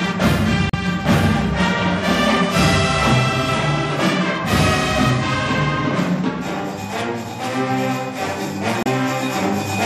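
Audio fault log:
Throughout, MP3 compression. The sound is plainly watery and swirly. This likely comes from a low bitrate, around 64 kbps.
0.70–0.75 s and 8.83–8.87 s, damaged data in a compressed stream. Each short glitch occurs as the decoder misreads frames, loses sync, and hunts for the next frame header.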